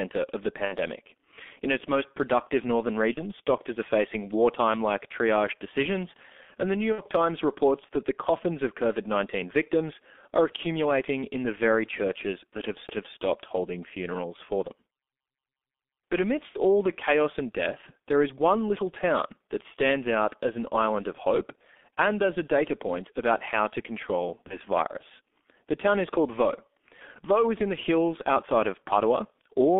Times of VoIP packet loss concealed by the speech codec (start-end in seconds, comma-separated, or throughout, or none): 0.65-0.76, 3.14-3.21, 6.92-7.03, 16.49-16.56, 24.47-24.56